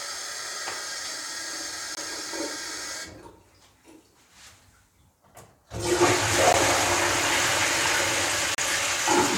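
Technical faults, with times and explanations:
1.95–1.97 s, 6.53 s and 8.55–8.58 s, block of digital silence: each is a sharp tick or brief dropout, with the longest at 8.55 s (about 33 ms) heard as a tiny hole and the shortest at 6.53 s (about 13 ms) closer to a single pop. In each, a run of samples was replaced by zeros, so the sound stops dead and restarts with no fade, and those hard edges cause the clicks.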